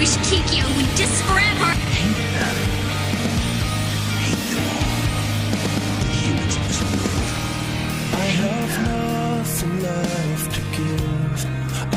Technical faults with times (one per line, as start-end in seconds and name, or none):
1.13-1.15 skip ahead
1.71-1.91 jitter buffer speed-up